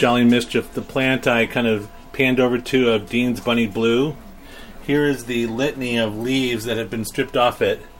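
No technical faults can be heard in this audio.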